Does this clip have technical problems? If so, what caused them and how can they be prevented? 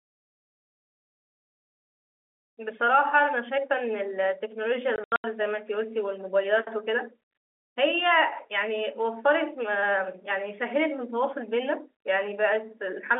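Yes. Between 4.96 and 5.24 s the speech breaks into short holes, about 180 ms of gaps scattered over 280 ms, the longest run 80 ms. This is packet loss filled with silence: missing packets, which fits 20 ms packets on this G.711 telephone line, were replaced by dead air with hard edges. Packet-loss concealment at the receiver and a steadier network path would prevent it.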